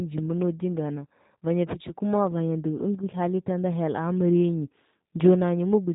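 Speech runs throughout through a G.729 codec, rebuilt from a vocal tract filter plus sparse pulses, so it sounds rough and synthetic, which fits an 8 kbit/s encode. A spectrogram shows nothing above 3.8 kHz, a flat ceiling across the whole clip, with smeared harmonic detail beneath.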